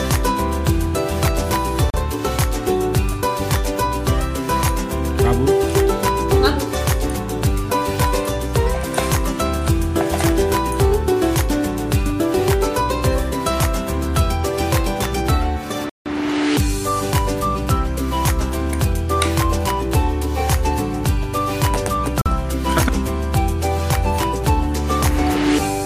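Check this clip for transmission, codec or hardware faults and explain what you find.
Three brief dropouts to silence occur, at 1.90 to 1.94 s (37 ms), 15.89 to 16.06 s (164 ms) and 22.21 to 22.26 s (44 ms). Each is most likely a Bluetooth stall. Radio interference delays packets on the wireless link. The receiver's buffer empties, so output stops until retransmitted data arrives. The sound cuts cleanly to nothing, then resumes. The second gap is much longer than the other two.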